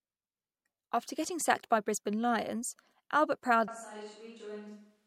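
From 3.68 s the speech turns roomy, hollow and about 10 dB quieter, likely a switch to a distant microphone: the waveform drops and the spectrogram loses bass.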